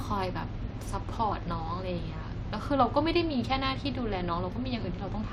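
Nothing stood out on listening to this speech recording.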